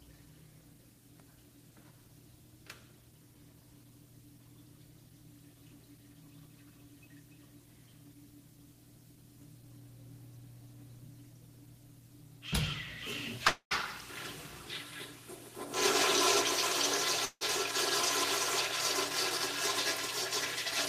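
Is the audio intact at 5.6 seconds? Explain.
Yes, the audio at 5.6 seconds plays through cleanly, with no dropout, click, distortion or other fault at that moment.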